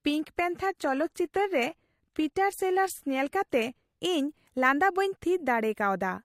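An adaptive stream starting at a low bitrate affects the first 4.0 s of this speech clip: the player opened on a cheap rendition to begin quickly, then switched up once it had gauged the connection. Until 4.0 s the treble sounds thin and synthetic, with nothing above 15 kHz and heavier codec artefacts, which points to HE-AAC at around 24 kbit/s. Quality then jumps, with no gap, to what sounds like AAC-LC near 96 kbit/s.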